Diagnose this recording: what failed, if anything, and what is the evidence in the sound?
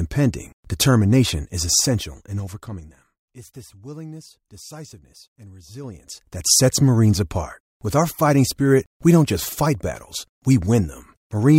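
Zipper noise from gain changes applied in the driver or buffer stage without per-sample smoothing. After "determination is", from 1.70 to 3.11 s, the level falls by about 20 dB in 3 dB jumps at roughly five per second. After "this willingness decisiveness and", from 5.78 to 6.57 s, it rises by about 20 dB at roughly ten steps per second. Each jump ticks, and the waveform envelope looks like a staircase. A spectrogram shows a thin full-band vertical line at every step.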